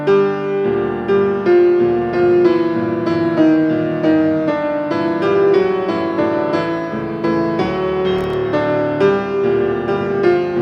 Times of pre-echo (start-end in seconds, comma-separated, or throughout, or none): none